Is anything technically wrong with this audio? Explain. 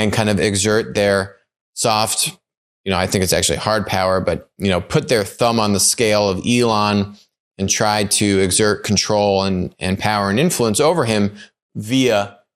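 Yes. Throughout the speech, the sound is dull with gurgling, granular distortion, likely from MP2 compression at a low bitrate, perhaps around 80 kbps, switching off upper sub-bands and coarsely quantising the rest.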